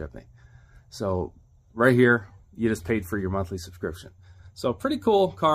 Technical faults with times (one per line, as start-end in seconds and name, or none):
none